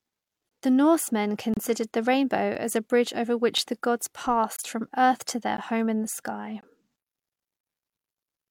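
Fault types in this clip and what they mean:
Gap between stream segments: The time stamps of neighbouring segments don't meet, so the player fills the hole with silence. Hard-edged dropouts of 14 to 29 ms cut the speech at 0.49, 1.54, 4.56, 5.57 and 6.61 s, on a one-second segment grid. No audio is lost.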